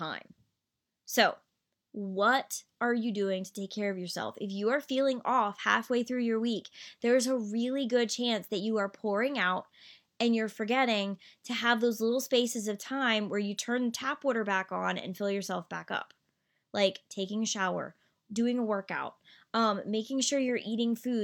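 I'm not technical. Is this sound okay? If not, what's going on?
Yes, it sounds fine.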